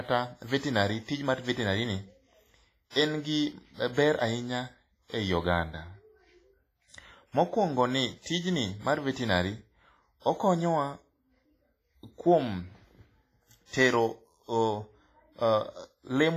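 Throughout the speech, a ringing, washy sound with hiss that breathes with the signal is likely heavy WMA compression, which fits a low bitrate around 24 kbps. Long blocks smear quantisation noise. A spectrogram shows patchy, holed harmonics and nothing above 15.4 kHz.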